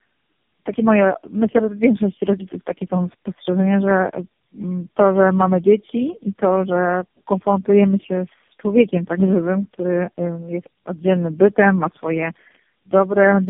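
Tandem speech coding runs throughout: four speech coders in a row compound each other's damage, leaving speech rougher and more warbly than one coder, with nothing above 3.6 kHz.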